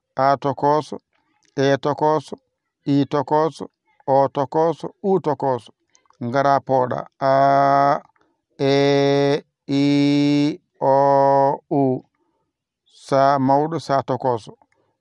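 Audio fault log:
No fault is heard in the audio.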